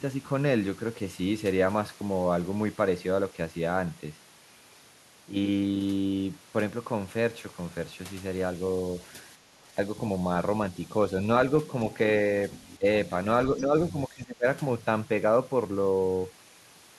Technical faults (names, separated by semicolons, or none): background gated by the echo canceller; speech suppressed in double talk; other side's voice leaking through